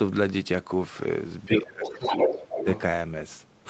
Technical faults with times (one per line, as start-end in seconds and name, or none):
1.43-2.81 other side's voice leaking through
1.47-2.67 speech suppressed in double talk